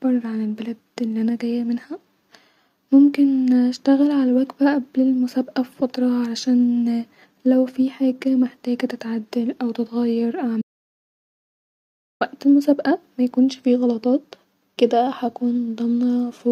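At 10.62 s the speech stops dead and the track falls to silence until 12.21 s, an audio dropout to silence lasting about 1.6 s. Nothing survives in the gap, not even room tone, so whatever was said there is lost. The likely cause is the input signal vanishing while the recorder kept writing silence. On a waveform this shows as a flat line, and on a spectrogram as a dark band edged by abrupt cuts.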